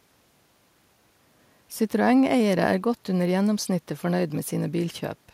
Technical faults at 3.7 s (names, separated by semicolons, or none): none